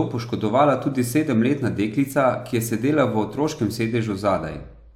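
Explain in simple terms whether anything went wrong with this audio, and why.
Nothing went wrong with this audio, since no fault can be heard anywhere in it.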